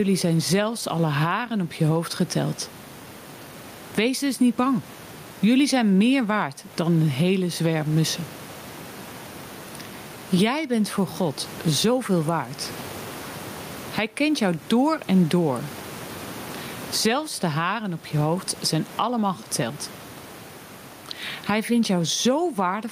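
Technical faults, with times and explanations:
Throughout, gain pumping: the gain swings by something like 20 dB, so loud and soft passages sit unnaturally close and the speech sounds squashed. The likely cause is microphone gain set far too high, with a fast limiter pulling it down on each loud sound. Unlike a noise gate, the background never cuts out. The room noise sits about 31 dB below the speech.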